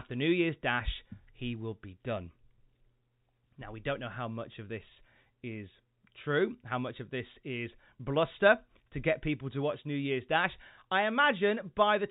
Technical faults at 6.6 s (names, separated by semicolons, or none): none